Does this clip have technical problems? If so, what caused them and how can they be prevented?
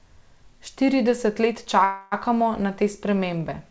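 Yes. Packets were likely held up in transit, draining the jitter buffer, so the receiver bridged the wait with a call audio freeze from 1.84 to 2.14 s. The last sound is stretched into a fading fill for about 0.28 s before the speech resumes at "na te", with nothing lost but everything after it arriving 0.28 s later. The sound above 8 kHz is absent, consistent with the wideband call codec in use. Prevent this with a stable, prioritised network link or a jitter buffer allowed a larger target delay.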